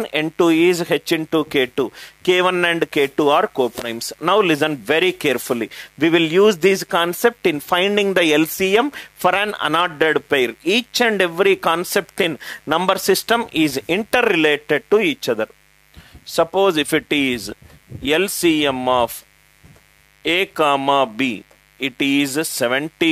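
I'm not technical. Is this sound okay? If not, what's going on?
No. A mains buzz runs underneath the sound for the whole clip, from the first second to the end at about 23 s. It is a steady, raspy hum-like buzz, quieter than the main sound but always there. It comes from the 50 Hz electricity supply leaking into the recording, for example through a light dimmer, a power adapter or a poorly shielded cable. Each cycle of the supply produces sharp spikes, which is why it sounds gritty rather than smooth.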